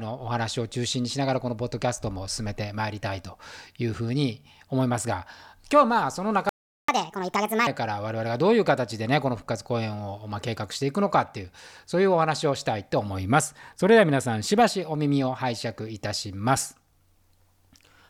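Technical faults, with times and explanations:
6.49–6.88 s, playback stall: the speech drops to silence for about 0.39 s in mid-flow, then carries on from where it stopped. The likely cause is the player running short of buffered data, or its output thread being held up, so nothing reached the output.
6.88–7.67 s, catch-up at higher speed: right after the gap the speech runs at 1.5 times normal speed, with pitch raised by roughly seven semitones. The player is resampling its backlog to win back the lost time, then returns to normal rate and pitch.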